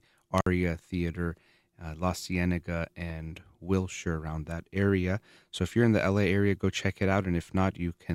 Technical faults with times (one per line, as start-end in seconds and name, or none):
0.38-0.46 intermittent contact